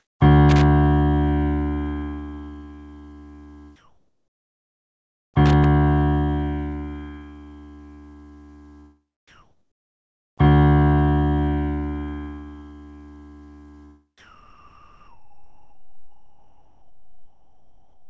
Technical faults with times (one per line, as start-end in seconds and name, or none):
0.00-0.20 comfort noise in place of the background
0.49-0.63 loose connector crackle
3.76-5.34 comfort noise in place of the background
5.46-5.65 loose connector crackle
9.28-10.38 comfort noise in place of the background
14.18-18.09 comfort noise in place of the background